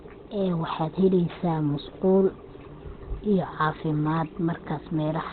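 A speech clip with Opus compression damage audible throughout: nothing is present above about 4.3 kHz, and the voice sounds muffled and hoarse. This is likely the codec running in its narrowband SILK speech mode, which fits a very low rate near 16 kbps.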